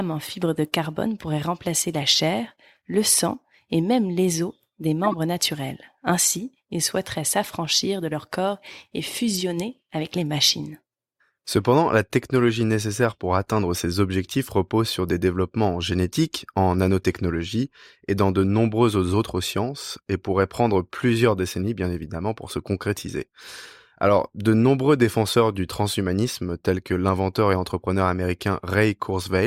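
At 5.04 s the speech is interrupted by a short glitch, lasting to 5.14 s, and a briefer glitch follows at 9.34 s. Both are corrupt frames that were decoded: flipped bits in the compressed data left the decoder with misread gains and codes, so it placed energy at the wrong frequencies for the span of each damaged frame. The first covers a few frames, the second a couple. Each peaks at around -15 dBFS.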